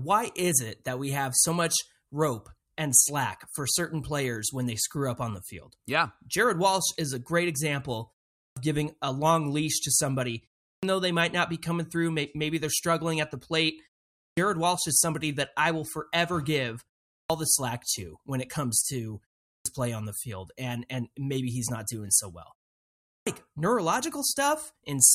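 Speech whose words at 8.43, 10.7, 14.23, 17.17, 19.52 and 23.14 s burst in without their first 126 to 143 ms: a clipped start after a pause, as the output device sleeps and re-wakes.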